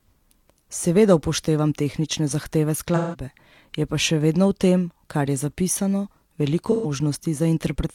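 AAC frame loss with concealment at 2.95–3.23 s and 6.71–6.90 s: lost frames are filled from the previous spectrum, giving a smeared, phasey patch rather than a dropout's clean silence.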